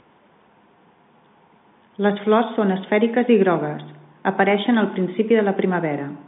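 No fault can be heard anywhere in the speech. It carries the narrow band of G.711 telephone coding, roughly 150 Hz to 3.6 kHz with nothing above 3.8 kHz, as expected of an ordinary 64 kbps phone line.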